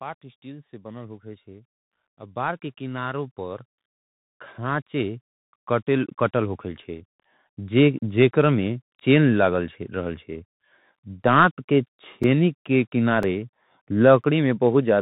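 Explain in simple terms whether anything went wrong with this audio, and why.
Bluetooth CVSD headset codec, throughout: the speech passes through a narrowband headset link that drops everything above 3.8 kHz, leaving s sounds scratchy, with a grainy hiss underneath.

Automatic gain rising, from 0.42 s to 8.12 s: the level control judged the input too quiet and slowly turned it up, so speech and background grow louder together.

Periodic USB or driver dropouts, once a second from 11.24 s to 14.24 s: a background task briefly stalls the audio path, and each time a few milliseconds of sound become silence, heard as regular ticks.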